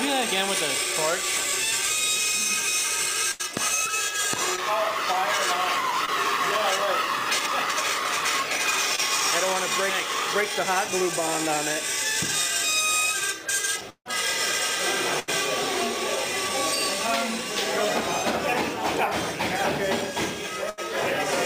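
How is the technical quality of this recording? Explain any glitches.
The recording has clear network dropouts, with brief patching at eight points where audio went missing.

Burst of packet loss at 3.31 to 3.41 s and again at 20.70 to 20.79 s: about 80 ms never arrived, so the receiver stretched the last sound into a fading buzz or hiss and then resumed past the gap. Unlike the shorter losses, a real chunk of material is skipped.

Short concealed packet loss at 4.56 to 4.59 s, 6.05 to 6.09 s and 8.95 to 9.00 s: roughly 20 ms each went missing and was filled by continuing the preceding sound, then blended back. Each is heard as a quick smear or wobble.

Repeated packet loss (robotic sound) from 13.9 to 15.29 s: three separate gaps totalling 240 ms, the longest 156 ms, meaning about 17% of that stretch is synthesised fill. Because the patches follow one another closely, the sound turns choppy, with pieces missing, instead of breaking once.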